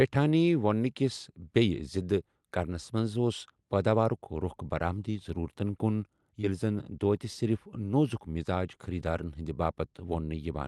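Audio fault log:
6.41–6.45 s, short concealed packet loss: just after "رۄخ برآمدی ضروٗرتن کُن" about 20 ms never arrived, so the decoder stretched the preceding sound across the gap, leaving a brief smear before blending back.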